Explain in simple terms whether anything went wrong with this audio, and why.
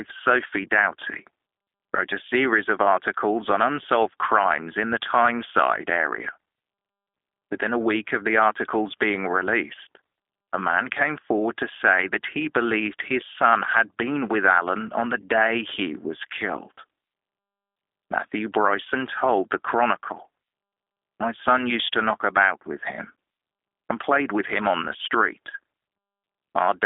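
Yes, something did: the whole recording went through a G.729 codec, a phone-call compressor that rebuilds speech from a rough model of the voice. It sounds slightly rough and synthetic from start to finish, with everything above about 3.7 kHz missing, hence that flat telephone quality.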